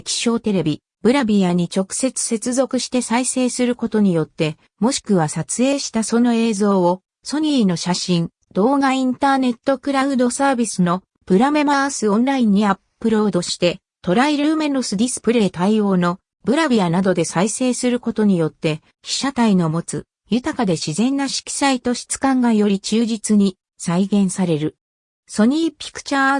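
No technical faults can be heard anywhere in the clip. Nothing in the audio stands out as a problem at any point.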